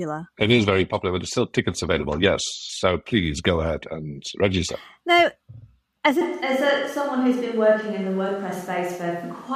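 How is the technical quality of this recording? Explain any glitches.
The recording has one clear fault: a switch to a distant microphone at 6.21 s, lasting to the end. From that moment the speech turns roomy and hollow and loses its low end, while the level stays about the same. The likely cause is that the close microphone's signal dropped out and a farther pickup took over. Room noise rises to roughly 35 dB below the speech. Unlike added reverb or an equaliser change, the character flips instantly and never recovers.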